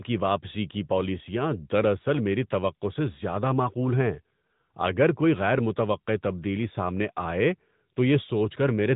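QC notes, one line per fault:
Throughout: AMR narrowband mobile codec. The speech is squeezed through a pulse-driven vocal-tract model, so it sounds buzzy and synthetic, consistent with a mid-rate mode, and nothing gets past 3.8 kHz.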